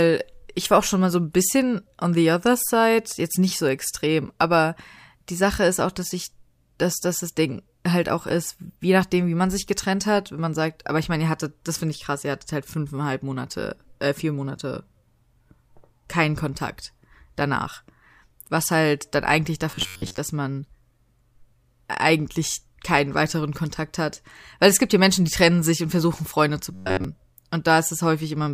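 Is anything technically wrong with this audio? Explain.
Yes. From 19.71 to 20.18 s, between "was halt dann eigentlich" and "dass man", and again from 26.74 to 27.04 s, the speech turns into a rigid metallic buzz near 94 Hz: robotic sound from repeated short buffers. This is likely a stalled feed, with playback looping roughly 11 ms chunks. That loop replaces most of the first stretch and all of the second.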